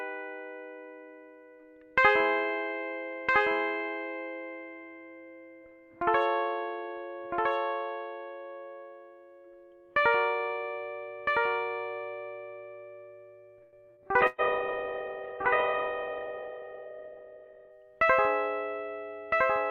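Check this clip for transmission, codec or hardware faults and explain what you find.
Several faults affect this music, one running the whole way through and a cluster between about 13.6 and 17.8 s.

Doubled audio track, throughout: a second full-band copy of the music trails the original by about a second and a half, roughly 5 dB quieter, dry and without any room colour. The likely cause is the signal being captured twice, once through a slower path, so both copies get mixed together.

Short stall from a late packet, 13.63 to 13.76 s: the sound hangs for about 94 ms with a slight buzz or dip, then carries on from where it stopped, with nothing lost. A packet arrived late, the jitter buffer emptied, and the receiver stretched the last sound until it came.

Burst of packet loss, 13.91 to 14.00 s and 14.27 to 14.41 s: the music turns into a held, fading buzz or hiss, then resumes further along, skipping about 60 ms and then about 120 ms. 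Consecutive packets never arrived in time, so the receiver extended and faded the last sound, then jumped ahead.

Call bitrate drop, 14.22 to 17.83 s: the music turns muffled and rough, losing everything above 4 kHz, then clears again. The call's bandwidth estimate fell, so the encoder went from 128 kbps to 8 kbps, coding coarsely and cutting the top end from 20 kHz down to 4 kHz.

Jitter buffer speed-up, 16.07 to 16.69 s: the music rushes at about 113% speed with unchanged pitch, and the tempo stumbles. After a backlog built up, the receiver trimmed short pitch-period slices repeatedly, removing roughly 100 ms to bring the delay back down.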